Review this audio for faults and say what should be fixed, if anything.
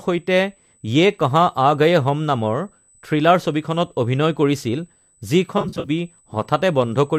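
USB whine runs throughout as a steady 8 kHz tone, about 35 dB below the speech. The bus's 125-microsecond microframe current is leaking into the audio's power or ground.

AAC frame loss with concealment hits between 5.58 and 5.90 s. About 160 ms of audio goes missing in short gaps, none longer than about 40 ms. The decoder patches them with smeared, phasey fill. The light low-delay coding points to AAC-ELD at around 64 kbps.

To prevent these, power or isolate the audio interface away from the USB ground, and add packet redundancy or jitter buffering on the link.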